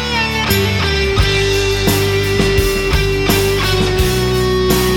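No technical faults can be heard anywhere in the clip.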